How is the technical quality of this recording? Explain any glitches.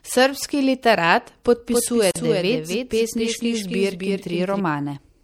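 The quality is poor. The speech carries plainly audible compression damage throughout, is doubled for nearly three seconds, and drops out briefly once.

MP3 compression, throughout: the sound is watery and swirly with dulled treble, likely from MP3 encoding at a low bitrate around 64 kbps. A spectrogram shows a hard high-frequency ceiling and flickering holes in the upper bands.

Doubled audio track, 1.71 to 4.60 s: a second full-band copy trails about a third of a second behind, a few decibels quieter. The likely cause is a slower second capture path. On a spectrogram, every pattern repeats with a fixed lag, and the copy starts and stops abruptly.

Gap at a join of encoded pieces, 2.11 to 2.16 s: a 45 ms silence where separately encoded pieces were joined with the encoder delay and padding left in. The waveform drops to a flat line with slightly smeared edges, then the speech continues.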